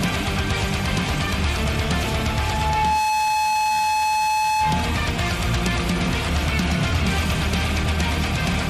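A microphone picking up its own loudspeaker pushes the loop past unity gain, causing loudspeaker feedback squeal: an 860 Hz tone swells within about a second from 2.17 to 5.07 s, reaching the level of the surrounding sound.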